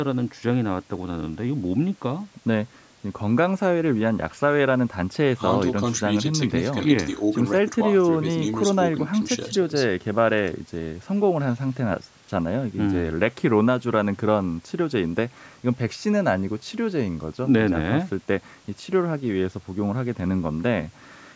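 No technical faults can be heard in this recording.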